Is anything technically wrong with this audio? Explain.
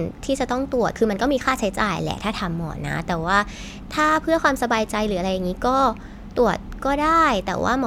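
No technical faults are audible.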